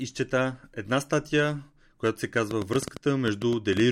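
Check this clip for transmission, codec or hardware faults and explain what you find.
One fault shows up: a train of clicks near the end of the clip.

From 2.51 s, right after "която се", to the end of the clip, a run of sharp, similar ticks sits on top of the speech, around fifteen in all. They arrive unevenly, at about 9.2 per second, and peak roughly 10 dB above the speech, so they cut through clearly. The cause is likely interference pickup or a faulty connection or power supply injecting brief pulses into the signal path.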